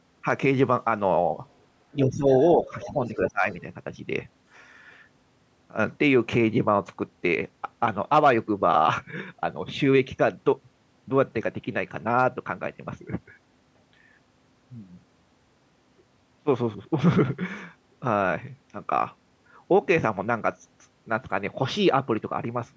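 From 1.98 to 2.31 s and again from 2.65 to 3.44 s, speech is suppressed in double talk. The level dips by roughly 10 dB and then by roughly 15 dB, likely because the echo canceller turned everything down while both sides talked at once. During the second dip, the other side's voice leaks through from 2.63 to 2.89 s at about 15 dB below the speech, and from 3.06 to 3.3 s at about 25 dB below. This is likely loudspeaker echo that was not fully removed from the microphone signal.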